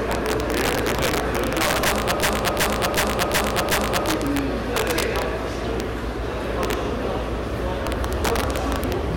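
Integer overflow runs through the whole clip. The sound is driven about 8 dB past full scale, and instead of being limited, each peak over the limit wraps to the opposite sign. This affects under one percent of samples, but each peak over the limit becomes a violent crack far sharper than ordinary clipping.

A system hang loop runs from 2.23 to 4.09 s. The system froze while the hardware kept cycling one 371.52 ms stretch, which fits a 16384-sample buffer. That stretch repeats five times at 2.69 Hz as a machine-gun stutter, and almost no audio is lost afterwards.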